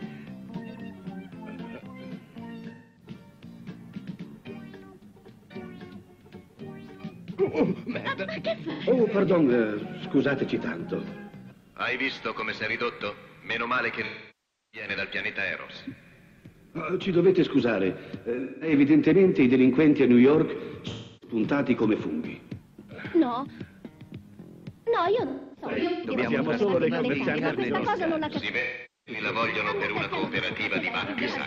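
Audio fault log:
2.74–29.22 s, AAC frame loss with concealment: losses at 2.74, 8.71, 14.05, 18.40, 20.92, 25.27 (scattered, longest run about 0.3 s) and 28.60 s, lasting 0.09–0.68 s. The decoder rebuilds missing frames from the last good spectrum, giving smeared, noisy patches that fade on the longest gap at 14.05 s.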